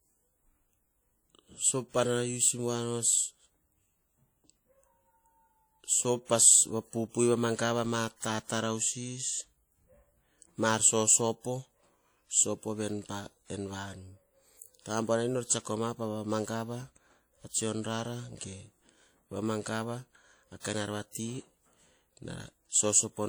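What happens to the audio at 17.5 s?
Right around 17.49 to 17.53 s there's a pre-echo: a quick smear of hiss, about 41 ms long, that lands just ahead of a sharp attack in the speech. The codec splits the audio into blocks and spreads its quantisation noise across the whole block, so noise scaled for the loud onset also fills the quiet gap before it. You hear a brief hissy lead-in, and the attack itself comes out soft rather than crisp.

That smear sits on top of damage you can hear across the whole clip, and it sounds very much like WMA compression, likely at a low bitrate, with the character fitting something around 48 kbps. The codec works on long transform blocks, so its noise rides along with the signal for tens of milliseconds. That gives the speech a ringing, washy quality and a hiss that breathes as the level moves. The long blocks are also what let the noise spill ahead of that attack.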